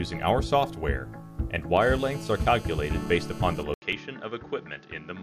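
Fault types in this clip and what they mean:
GSM phone buzz: A nearby 2G phone on a call pulses its transmitter about 217 times a second, and the audio circuitry rectifies those bursts. From 1.81 to 3.63 s a steady, raspy 217 Hz buzz rich in harmonics sits about 20 dB below the sound.
Input switched to a poorer device: The recording most likely jumped to a lower-quality microphone or headset profile at 3.74 s. After an 80 ms gap the sound becomes duller, with nothing above 6.7 kHz, slightly quieter, and carries a new faint background noise.
Overlap between stream segments: Two streamed segments carried overlapping time stamps, so the player trimmed audio that was never actually duplicated. At 3.93 s about 16 milliseconds vanish and the waveform jumps, producing a brief click or tiny skip at the segment boundary.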